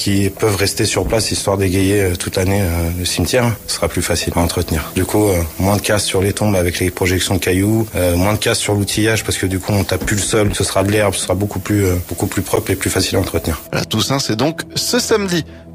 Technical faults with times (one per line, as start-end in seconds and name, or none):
2.94 block of digital silence
12.56 block of digital silence